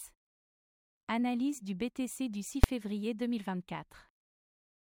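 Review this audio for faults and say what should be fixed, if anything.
At 2.64 s there is one sharp, very loud bang: invalid numbers at full scale. A calculation returned infinite or invalid values, which were pinned at maximum amplitude for about 5.8 ms, consistent with a single 256-sample processing block. The block is so short that its start and end edges merge into a single bang instead of two separate pops. To prevent this, check for NaN and infinite values after each processing stage and replace them with zero before output.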